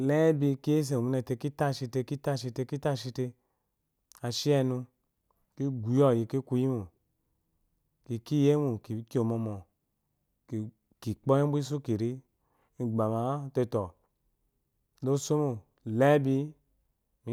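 No technical faults can be heard anywhere in the speech recording. There is no event in it that needs a time mark or an explanation.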